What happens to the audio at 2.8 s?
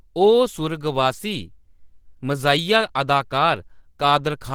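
At 2.8 s the speech sounds hoarse and grainy rather than swirly like MP3, likely Opus compression in hybrid mode at roughly 16 kbps, present throughout the clip.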